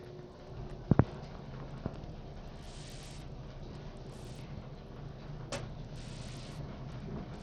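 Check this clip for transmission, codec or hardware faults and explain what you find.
One codec fault runs through the whole recording. Bluetooth SBC compression, present from start to finish, is the likely cause of the damage heard here. The sub-band coder divides the signal into a handful of wide frequency bands and hands out bits without any model of hearing. With a small budget, the quieter upper bands lose their bits first, and the rest are quantised coarsely. The treble thins and flickers in and out, while a gritty grain and aliasing ride on the everyday sounds, which fits a stream squeezed to roughly 80 kbps.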